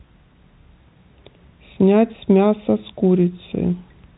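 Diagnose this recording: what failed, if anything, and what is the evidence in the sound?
Nothing failed: the speech comes through an ordinary G.711 telephone coding path, band-limited to 4 kHz as that format requires, and no stage from wiring to playback leaves evidence of a fault.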